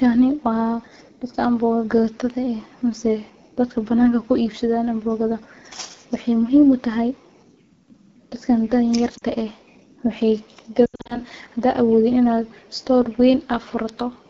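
AMR wideband (HD Voice) codec damage runs through the whole clip. The speech sounds rough and raspy throughout, which points to one of the low rates near 8.85 kbit/s, where the pulse-driven vocal tract model codes too coarsely and the top band is only shaped noise.

Lost AMR speech frames first appear at 9.17 to 9.23 s, a 40 ms gap that fits two 20 ms frames. The decoder reused the last good pitch and vocal tract settings at falling gain, giving a brief dip or warble.

More lost AMR speech frames follow from 10.86 to 11.21 s. About 180 ms is missing, scattered over 240 ms, with the longest run 80 ms. The sound fades quickly toward silence within the longest run, and returns weak or rough between runs.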